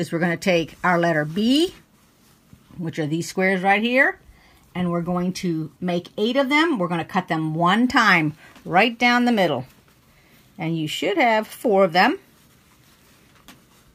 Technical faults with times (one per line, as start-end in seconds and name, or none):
0.00-13.94 sample clock jitter